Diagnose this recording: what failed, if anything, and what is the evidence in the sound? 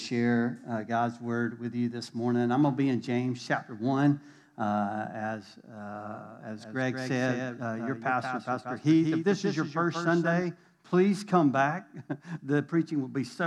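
A doubled audio track, likely from a second capture path, such as a monitor return or a duplicated route at the driver or buffer stage, being mixed back in alongside the direct signal. From 5.96 s to 10.42 s, a full-band copy of the sound trails the original by roughly 200 ms, sitting about 5 dB lower. It has no reverberant tail or tonal colouring, so it reads as a hard slapback. It cuts in and out abruptly at both boundaries rather than fading.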